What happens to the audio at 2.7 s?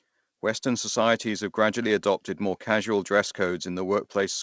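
Nothing goes wrong at 2.7 s: the speech carries on intact through that moment, with only the steady 8 kHz upper limit of the G.722 call path that runs through the whole clip.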